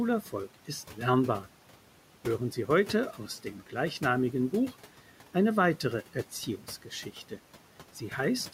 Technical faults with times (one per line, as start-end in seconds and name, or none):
0.00-8.54 noise suppressor artifacts
0.22-0.33 speech cut by the noise suppressor
3.18-3.74 speech cut by the noise suppressor
6.14-7.38 speech cut by the noise suppressor